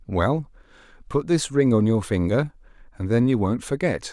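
No technical faults are audible anywhere in the recording.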